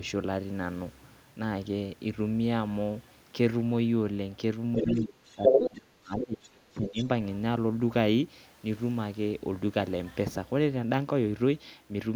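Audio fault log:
4.8–6.53 s and 6.73–7.0 s, speech suppressed in double talk: the speech level collapses in patches while a second talker is active, dropping by roughly 30 dB at worst in the first stretch (about 1.5 s affected in total) and roughly 15 dB in the second (about 0.3 s). The likely cause is an echo canceller that could not separate the near talker from loudspeaker echo and attenuated everything during the overlap.
4.82–5.01 s, 5.43–5.7 s and 6.98–7.06 s, other side's voice leaking through: short fragments of a second voice come through the microphone path. They sit about 10 dB below the main speech at first, then about 10 dB above it in the middle fragment, and about 15 dB below it in the last. This is likely far-end audio from the loudspeaker that the echo canceller left unremoved, which is why it arrives in brief pieces.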